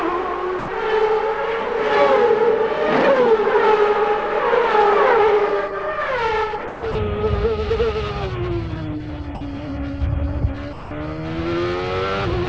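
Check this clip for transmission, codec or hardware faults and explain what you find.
Five short dropouts point to sound dropped by the voice detector, at 0.59–0.68, 6.68–6.83, 6.92–6.95, 9.35–9.41 and 10.73–10.91 s. The sender likely judged that sound to be background and stopped transmitting. The receiver then filled each 30 to 180 ms gap with synthetic comfort noise, so the sound briefly gives way to steady noise or near silence before returning. The call path itself comes through band-limited, with nothing above 8 kHz, as G.722 coding would give.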